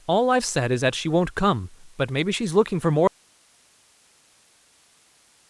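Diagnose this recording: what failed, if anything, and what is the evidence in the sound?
Likely break in analogue wiring: audio dropout to a faint residue at 3.08 s, speech giving way abruptly to hiss about 35 dB down.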